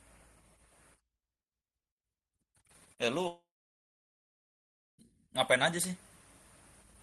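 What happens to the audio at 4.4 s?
At 4.4 s the sound is gone. From 3.27 s to 5.00 s there is a gap, likely a long network dropout. The last sound carries on as a fading buzz, then about 1.5 s of silence. Audio resumes at 5.00 s, with the missing part lost.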